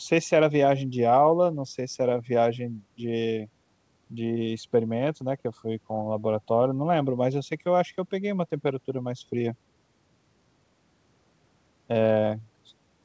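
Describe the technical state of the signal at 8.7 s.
At 8.7 s the speech is intact, with no fault in the signal at that moment.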